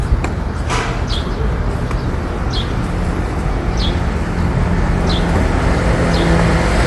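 A short recording of sounds, and the whole thing carries a grainy, breathy texture on top, with nothing at all above about 11.5 kHz, so the top end feels capped and a bit washed. That combination points to Bluetooth LC3 compression as the likely cause: the codec throws away much of the upper spectrum and patches it with shaped noise. The damage is plainly audible throughout and fits a 48 kbps stream with 10 ms frames.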